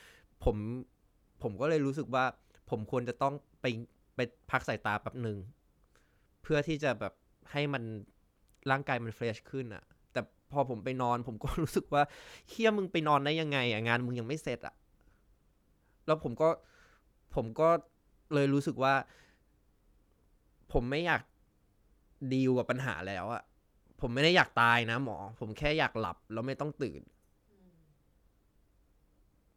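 No technical faults can be heard anywhere in the recording.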